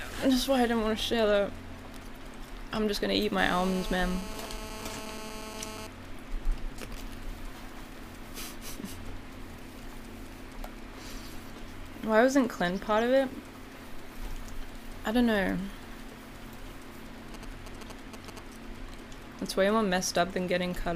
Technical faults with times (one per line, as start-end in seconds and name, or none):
3.38-5.87 GSM phone buzz
17.34-18.39 GSM signalling bursts